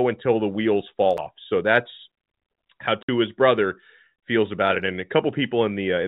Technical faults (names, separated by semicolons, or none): CD skip; packet loss filled with silence